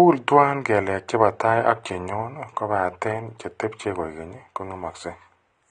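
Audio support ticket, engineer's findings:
Speech dull and smeared throughout, nothing above 9.7 kHz; warbling, fizzy sibilants. Likely AAC compression: coarse quantisation and lowered cut-off, consistent with AAC-LC around 32 kbps.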